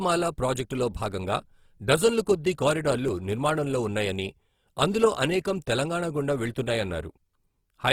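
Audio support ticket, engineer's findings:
Grainy, rough, noise-filled speech throughout, top end still extending to about 20.3 kHz. Likely Opus compression in CELT mode, band energy preserved but fine detail replaced by folded or noise-filled bands. Artefact level fits a bitrate around 16 kbps.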